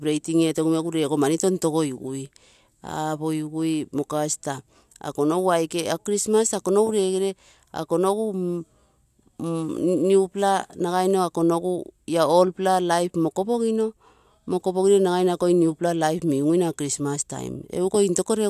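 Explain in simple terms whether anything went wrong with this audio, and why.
Nothing went wrong with this recording that can be heard. No faults turn up anywhere in the speech.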